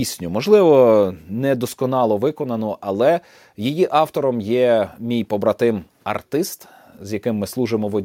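Speech recording with no audible technical faults anywhere in it.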